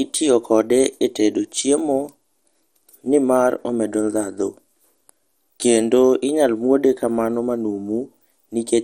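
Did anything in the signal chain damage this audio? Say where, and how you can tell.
Yes. The damage sits at the codec stage and runs through the whole speech clip. It sounds like MP2 compression, likely from a low-rate Layer II encode around 64 kbps. With so few bits, the upper sub-bands keep switching off and the ones that remain are coarsely quantised. The result is dull, gurgling, granular speech. On a spectrogram the energy stops hard at about 16.5 kHz, and below that the high bands show as blocky patches that blink on and off.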